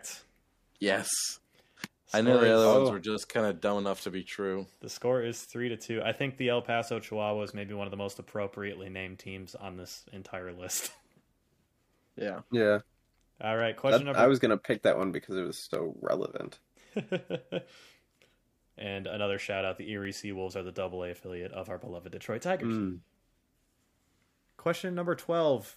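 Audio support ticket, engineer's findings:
Regular clicks every 0.72 s, 0.67 to 25.08 s, about forty. Clock drift buffer slips, likely. Free-running clocks, roughly 300 ppm apart; each slip drops or repeats a few samples.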